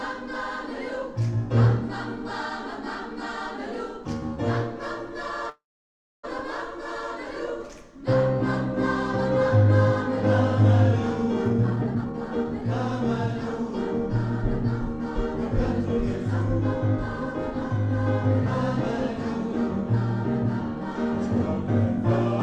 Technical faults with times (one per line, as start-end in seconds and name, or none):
5.49-6.25 call audio freeze
11.45-12.62 jitter buffer speed-up
13.59-15.05 jitter buffer speed-up
19.11-21.06 jitter buffer speed-up